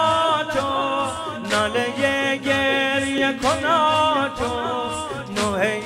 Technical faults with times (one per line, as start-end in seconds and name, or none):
1.17 overlapping chunks
3.18 overlapping chunks
5.19 overlapping chunks